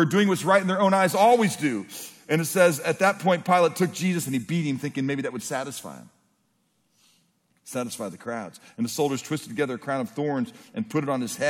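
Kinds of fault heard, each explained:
Nothing to flag here: the audio runs along steadily from beginning to end with no dropouts, glitches or other technical faults showing up along the way.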